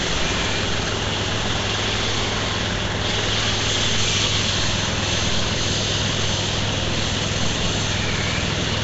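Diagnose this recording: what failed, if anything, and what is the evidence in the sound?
The codec stage failed throughout: the sound carries a rough, hissy grain and a smeared, watery blur, with nothing above 7.7 kHz. Unlike a simple low-pass, weak bands are filled with noise, which points likely to Nellymoser compression at a rate that fits 32 kbps.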